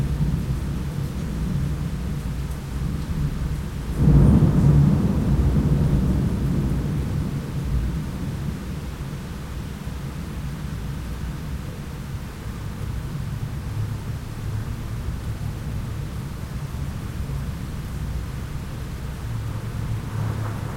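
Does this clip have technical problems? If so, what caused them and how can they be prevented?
Yes. At 12.15 s, one Bluetooth LE Audio frame, which fits a 7.5 ms frame, was lost; the LC3 decoder patched it with the previous spectrum under random signs, giving a brief noisy smear. Keeping the source close to the receiver with a clear radio path and away from 2.4 GHz interference prevents such dropouts.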